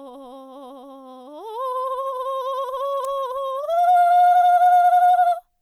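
At 3.04 s a sharp snap, peaking around -20 dBFS, sits on top of the music. This is an electrical switching spike, likely from a nearby switch, motor or static discharge arcing briefly and coupling into the audio line. It lasts just under a hundredth of a second. A dropout or edit click would instead interrupt the music, and vinyl crackle would repeat throughout rather than strike once.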